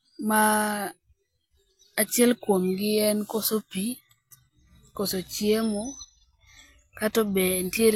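No technical faults occur at any point in this speech recording.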